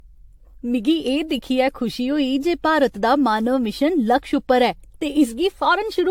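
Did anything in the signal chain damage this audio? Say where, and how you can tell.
Yes, in the codec: generation loss, likely from about seven AAC passes near 96 kbit/s. Quantisation noise piles up, so the speech sounds swirly, hollow and blurred throughout, with nothing above 18.6 kHz.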